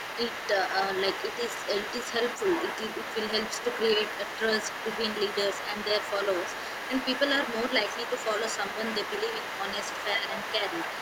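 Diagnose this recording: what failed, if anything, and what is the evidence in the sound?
Other side's voice leaking through, from 0.0 to 0.48 s, 0.64 to 4.39 s, 4.59 to 10.09 s and 10.27 to 11.01 s: a second voice sits under the speech at about 10 dB down, across nearly the whole clip. The stage is call processing. The likely cause is an echo canceller that failed to subtract the loudspeaker signal picked up by the microphone.

Speech suppressed in double talk, at 10.17 to 10.25 s: the talker's level dips by a few decibels for well under a tenth of a second. This is also call processing. With both sides active, the canceller likely misjudged the near speech as echo and attenuated it.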